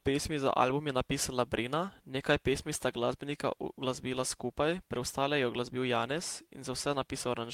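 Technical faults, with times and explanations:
No technical faults detected.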